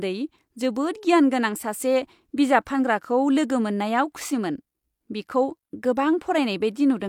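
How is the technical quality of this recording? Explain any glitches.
The technical quality of this recording is good, with no glitches to explain.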